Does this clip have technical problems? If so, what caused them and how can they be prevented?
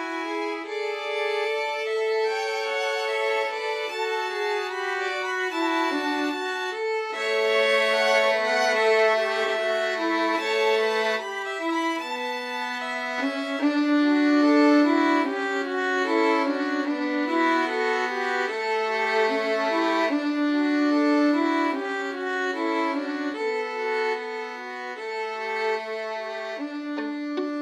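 No, there's nothing here that needs fixing, so there's no cause to trace and nothing to guard against this time.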